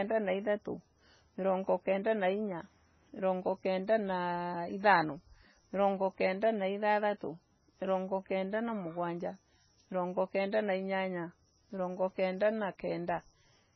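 Throughout the speech, the treble stops dead at 6 kHz and sibilants turn watery and swirly, with metallic chirps. This is likely heavy MP3 compression, consistent with a very low bitrate near 16 kbps. A spectrogram shows a flat ceiling at 6 kHz and weak detail flickering in and out.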